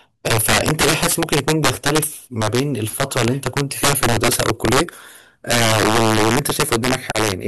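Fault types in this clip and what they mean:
Integer overflow: the speech is driven about 10 dB too hot somewhere in an integer path, and instead of being capped at full scale, the loudest peaks wrap straight around to the opposite sign. A few percent of the samples go over, so it's only the louder moments that suffer, but each one jumps across the whole range. You get harsh, violent cracks on those peaks, far nastier and snappier than ordinary clipping would sound, all through the clip.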